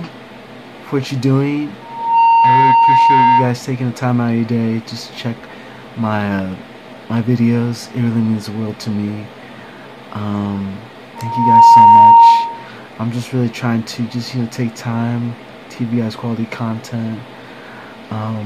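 A microphone picked up its own loudspeaker, and at 925 Hz the loop gain passed one, causing loudspeaker feedback squeal. A single tone swells within about 0.4 s into a squeal, from 1.81 to 3.57 s at about 10 dB above the sound, and again from 11.16 to 12.69 s at about 15 dB above.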